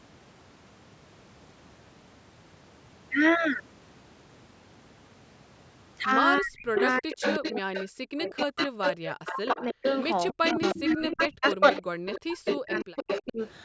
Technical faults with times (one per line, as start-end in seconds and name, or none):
6.40-8.72 speech suppressed in double talk
6.74-7.85 echo leak
8.22-13.47 echo leak
9.13-9.84 speech suppressed in double talk
10.33-13.39 speech suppressed in double talk